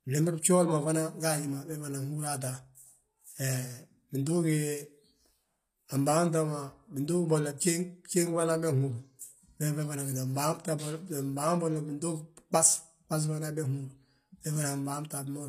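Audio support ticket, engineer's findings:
Speech, full length. Gritty, lispy s sounds. Treble extended but not true, metallic. Likely HE-AAC compression at a low bitrate, fitting roughly 24 kbps. Upper band rebuilt by spectral band replication. Copied harmonics misalign above the crossover. Damage plainly audible.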